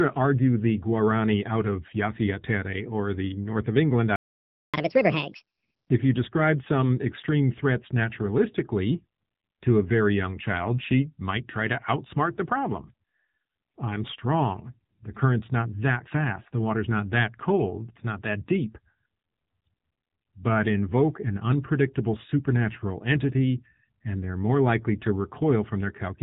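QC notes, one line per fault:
Throughout: AMR narrowband mobile codec. The speech is squeezed into the 8 kHz-sampled mobile band, so nothing above 4 kHz survives and sibilants and consonant edges are dull and boxed in. At 7.95 kbps the damage is plainly audible: the voice is rebuilt from a vocal-tract model excited by a few pulses per subframe, which gives it a buzzy, synthetic quality rather than a natural timbre.
4.16 to 4.74 s: playback stall. The speech cuts off mid-flow and the output goes silent for about 577 ms before resuming. That pattern, a clean gap in mid-flow, points to the player running short of buffered data or having its output thread held up, likely an underrun, and simply waiting until it could carry on.
4.74 to 5.89 s: catch-up at higher speed. Immediately after the gap the speech runs at 1.5 times normal speed for just over a second, and because the backlog is being resampled rather than time-stretched, pitch rises with it, by roughly seven semitones, giving a chipmunk lift. 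Once the lost time is recovered, at 5.89 s, speed and pitch drop back to normal.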